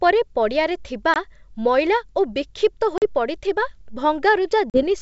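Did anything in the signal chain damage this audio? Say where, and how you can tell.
Yes, at the network stage. This is packet loss on an ADPCM call, carried over G.722 wideband coding at 64 kbit/s. Hard-edged silent gaps appear at 1.14 to 1.16 s, 2.98 to 3.04 s and 4.70 to 4.84 s. They drop about 20, 40 and 40 ms of speech, which fits one packet and then two each time. When the speech returns, it comes back with some distortion, then settles. This happens because the decoder's adaptive predictor and step size have drifted out of step with the sender's.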